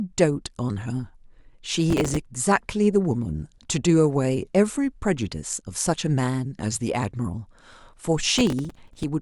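At 1.90 to 2.17 s, and again from 8.39 to 9.04 s, the speech picks up a burst of processor overload crackle, a gritty tearing riding on top of it. The processor fell behind on its tiny buffers, which sound like just a few milliseconds each, and kept missing deadlines in a row. Each miss replayed a scrap of old audio with hard edges. The second burst is longer and fits a few dozen misses. Both clear once the load drops.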